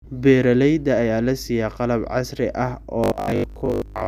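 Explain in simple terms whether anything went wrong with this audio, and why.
The audio stream likely stopped delivering fresh sound often enough from 3.04 s to the end at 4.08 s, so the playback software kept repeating its last short piece, about 20 ms long, for most of that stretch while the real speech was skipped. This is robotic sound from repeated short buffers. The constant repeating stamps a fixed 50 Hz buzz onto the voice, making it sound metallic and mechanical while it still loosely follows the speech.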